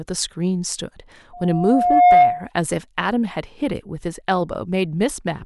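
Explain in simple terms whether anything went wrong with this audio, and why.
Something did go wrong: there's a loudspeaker feedback squeal from about 1.33 s to 2.50 s. A microphone was picking up the speaker it was feeding, so the sound kept looping round and getting louder at one pitch, here about 713 Hz. You can hear that single tone swell over roughly the first 0.7 seconds until it's clearly louder than the speech, then it stops at about 2.5 s.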